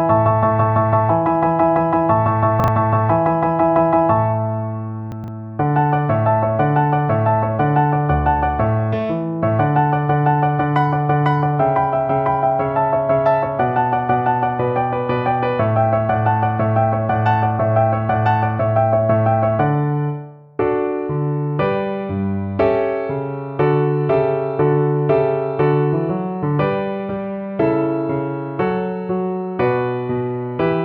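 At 2.6 s and again at 5.12 s you get chunks out of order. A 40 ms chunk turns up late, one slot late the first time and three slots late the second (through 5.28 s). Nothing's missing, but the order jumbles for a moment at the hard joins.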